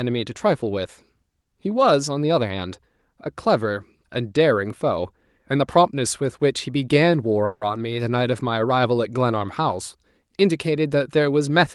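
At 7.45 s the speech stalls into a brief fading buzz or hiss for about 160 ms, then resumes at 7.64 s: a call audio freeze, likely from late packets emptying the jitter buffer.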